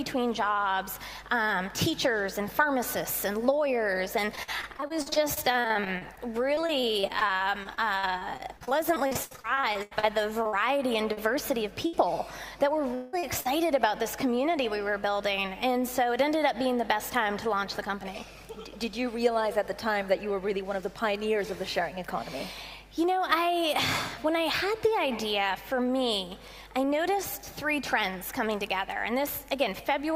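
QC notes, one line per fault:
4.35–11.19 s, repeated packet loss (robotic sound): for almost seven seconds the stream keeps losing stretches of audio, dozens of small holes, the longest about 82 ms, adding up to roughly 1.4 s and about a fifth of the span. Each hole is patched by extending the preceding sound, so the result is choppy, with pieces missing. A spectrogram shows frequent smeared, flattened patches with repeated harmonics breaking up the normal texture, and the waveform shows many short, uniform-looking segments.
11.87–11.95 s, burst of packet loss: about 60 ms in a row never arrives in time to be played. The receiver stretches the last sound across the hole and lowers its level, giving a brief held buzz or fading hiss before the audio resumes further on with that piece missing. On a spectrogram this is a short band of frozen, horizontally streaked content that dims toward its end, and the waveform shows a small repetitive, tapering block.
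12.95–13.15 s, long network dropout: around 180 ms of audio is gone, likely because the network delivered nothing for that stretch. The gap never reaches silence. It is covered entirely by a continuation of the last sound that decays as a buzz or hiss until real audio returns from a later point. The spectrogram shows a smeared, steadily fading region with no new onsets, and the waveform shows a decaying periodic or noisy envelope instead of natural variation.
13.19 s to 13.25 s and 13.41 s to 13.47 s, short concealed packet loss: two brief holes of about 40 ms each are filled by extrapolating from the preceding sound, as continued pitch if voiced and as shaped noise if not, and then crossfaded back into the real signal. Each is heard as a quick smear or wobble, and a short consonant-like event can disappear. A spectrogram shows narrow blurred slivers where detail flattens, and the waveform shows tiny repeated cycles at the joins.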